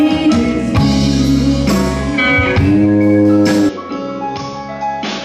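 At 3.69 s the sound abruptly turns duller and drops by roughly 10 dB, with no gap at the changeover. Everything above 6.9 kHz vanishes and a faint new noise floor appears, most likely the input switched to a poorer device, which carries on through the end.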